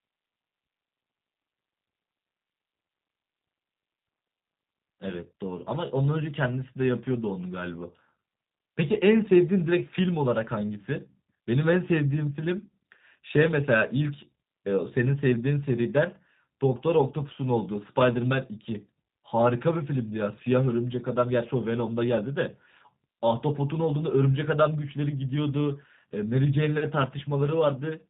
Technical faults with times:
0.00-28.09 G.729 codec

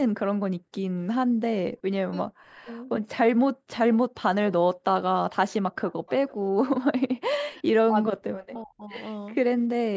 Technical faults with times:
1.26-1.40 background gated by the echo canceller
1.82-2.67 speech suppressed in double talk
2.69-2.73 echo leak
5.71-6.34 echo leak
7.45-7.62 echo leak
7.52-8.95 speech suppressed in double talk

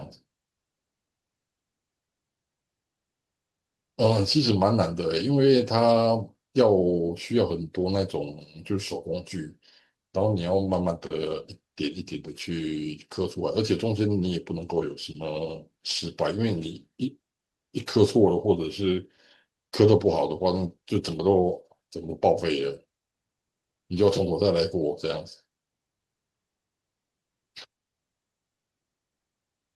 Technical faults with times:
none

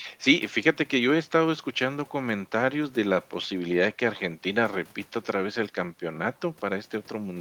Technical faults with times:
none

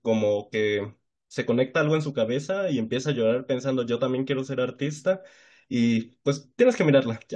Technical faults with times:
none

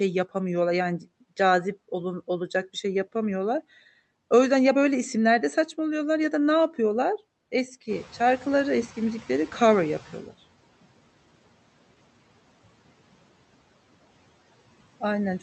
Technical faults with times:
7.88-10.33 noise suppressor catching up

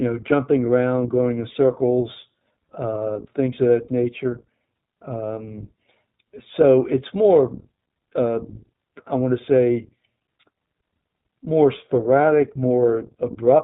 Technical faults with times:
0.00-13.64 iLBC codec
3.14-3.17 lost iLBC frames

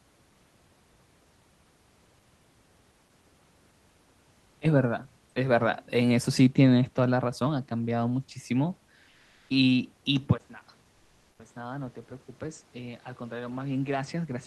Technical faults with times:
9.09-9.49 comfort noise in place of the background
10.38-14.46 input switched to a poorer device
10.91-11.39 comfort noise in place of the background

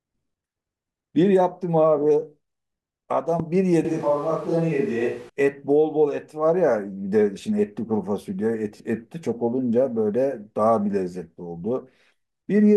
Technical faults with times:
3.40-3.42 loud pop
3.85-5.29 switch to a distant microphone
8.77-8.80 lost LE Audio frames

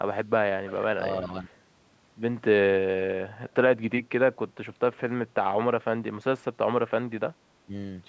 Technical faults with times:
0.67-0.83 echo leak
1.28-1.54 speech suppressed in double talk
1.47-1.57 echo leak
7.66-7.71 speech suppressed in double talk

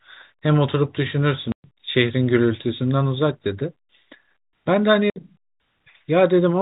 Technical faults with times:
1.52-1.64 packet loss filled with silence
5.10-5.16 packet loss filled with silence

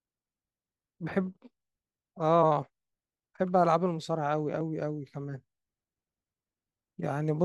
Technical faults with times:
none

